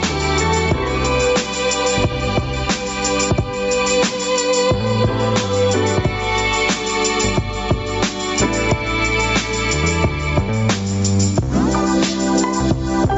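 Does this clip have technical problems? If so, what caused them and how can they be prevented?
Yes. Gain pumping runs through the whole clip. The level ducks by around 10 dB the moment a loud sound arrives, so the level seems to breathe, with loud and soft passages squeezed close together. The likely cause is input gain set far too high, with a fast limiter or compressor repeatedly clamping it. Nothing above 8 kHz comes through, as expected from the call's codec and microphone processing. Lowering the input gain so the limiter rarely acts prevents the pumping.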